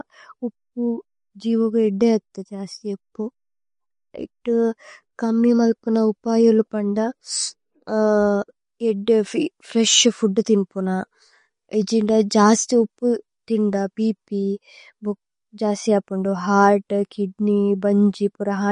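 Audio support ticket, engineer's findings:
MP3 compression, throughout. Speech band stops dead near 10.5 kHz, with plainly audible watery, swirly texture and chirpy sibilants. Likely a low-bitrate MP3 encode, around 40 kbps: encoder cutting treble and switching weak spectral lines on and off between frames.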